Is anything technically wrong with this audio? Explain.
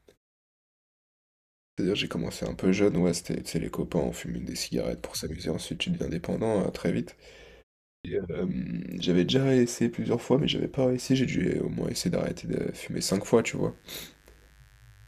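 Yes. There are two problems. At 1.71 s and again at 7.98 s, the speech shows a clipped start after a pause. The first pause lasts about 1.6 s and the second about 0.4 s. The output device appears to drop into a sleep state during the quiet and needs time to wake and lock again. About 67 ms of sound is lost each time. The speech then jumps in abruptly, with its opening sounds missing.

From 13.4 s to the end there is mains buzz. It is built on a 50 Hz supply. Sharp switching spikes from a dimmer, a rectifier or a poorly shielded cable enter twice per mains cycle. They spread harmonics from 50 Hz up into the kilohertz range. The buzz sits roughly 35 dB below the speech. It is heard as a steady, raspy buzz under the voice.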